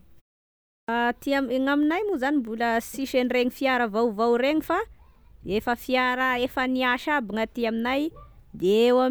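At 0.65 s the speech comes back after a pause of about half a second with its opening missing: a clipped start after a pause, where the output path dozed off in the silence and took until 0.88 s to wake and lock again, swallowing roughly 234 ms. The word bursts in abruptly without its first sounds. That sets it apart from muted pauses, where only the background drops out in gaps and the speech itself arrives intact.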